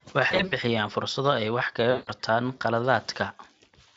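Around 0.31 to 0.53 s and again 1.91 to 2.09 s, VoIP packet loss concealed by the speech codec stretches the speech into a buzzy tone or coloured noise that fades before it recovers.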